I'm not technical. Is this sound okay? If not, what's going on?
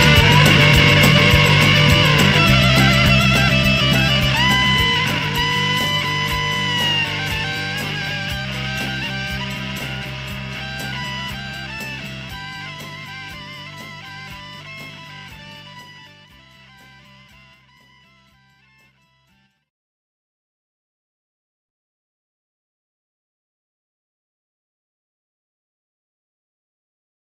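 No. From the start to about 5.48 s there is a time-stretched section: that stretch plays roughly 1.73 times faster than the rest, then the pace suddenly settles at normal. It sounds rushed, yet the pitch doesn't rise. That is the giveaway: simply playing audio faster would make everything higher and squeaky, while here the pitch holds. Software likely squeezed this part to fit a length by dropping tiny pieces.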